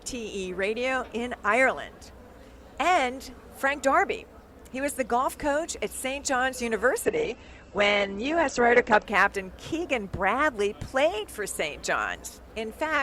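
From 7.05 to 9.05 s, the adaptive stream switches to a lower bitrate. The treble suddenly vanishes above 8.4 kHz. Codec artefacts thicken. There is no gap. The switch points to a slowed connection and a low-bitrate Opus version.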